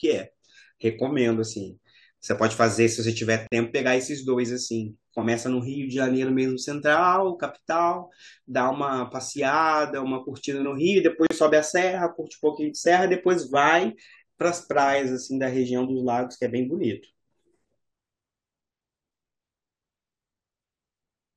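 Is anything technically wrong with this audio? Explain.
Yes. The speech has two gaps at a join of encoded pieces, at 3.47–3.52 s (47 ms) and 11.27–11.31 s (39 ms). Separately encoded segments were joined untrimmed, leaving encoder delay and padding as silence. The speech drops out briefly, then resumes where it stopped. Waveform and spectrogram show a blank strip with smeared edges.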